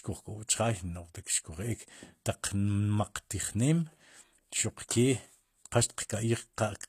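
From start to finish the speech has gritty, lispy s sounds and a synthetic-sounding treble that stops at 14.9 kHz. That points to likely HE-AAC compression at a low bitrate, around 24 kbps. The treble is rebuilt from copied lower bands, so unlike a plain low-pass it stays bright but metallic.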